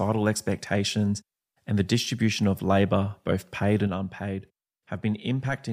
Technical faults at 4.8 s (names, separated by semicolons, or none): one channel drops out